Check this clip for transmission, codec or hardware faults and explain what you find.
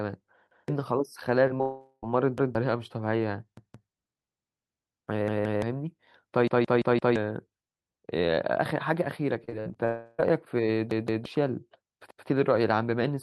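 The speech has clear transmission faults: a playback buffer repeating, packet loss concealed briefly and over longer stretches, and one burst of robotic repeated loss. All of it comes through a call codec whose top end stops near 12 kHz.

Repeated buffer, at 0.51, 2.38, 3.57, 5.28, 6.48, 10.91 and 12.11 s: fresh audio missed its deadline, so the device replayed its last chunk of about 0.17 s, which fits an 8192-sample buffer. Each repeat is a hard-edged stutter. At 6.48 s the chunk plays four extra times and roughly 0.7 s of audio disappears.

Short concealed packet loss, at 1.47–1.52 s and 1.58–1.61 s: about 20 ms of the stream failed to reach the decoder each time. The receiver extended the preceding sound to cover the gap, leaving a brief smear or wobble.

Long network dropout, at 1.61–2.04 s and 9.85–10.20 s: the sound stretches into a fading buzz or hiss for about 0.4 s and about 0.3 s respectively, and the first ends in a short silence. 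Audio then resumes with that portion gone, likely because nothing arrived from the network in those spans.

Repeated packet loss (robotic sound), at 9.44–9.77 s: four separate gaps, the longest 56 ms, were each patched by continuing the last sound. Close to 40 percent of that span is synthetic fill, so it comes across as choppy.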